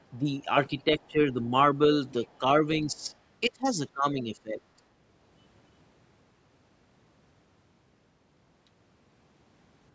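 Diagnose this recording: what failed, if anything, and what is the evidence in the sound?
Speech suppressed in double talk at 0.18–0.47 s, 0.69–1.53 s, 2.39–2.43 s, 2.63–3.13 s and 3.48–4.6 s. The speech dips in pieces, by about 5 to 25 dB, deepest in the 3.48–4.6 s stretch. In call processing, the echo canceller likely confused this talker with loudspeaker echo and turned both down.

Other side's voice leaking through at 2.11–2.38 s and 3.0–3.12 s, as a faint second voice roughly 35 to 40 dB below the speech. Also in call processing: the echo canceller likely left residual loudspeaker pickup in the microphone signal.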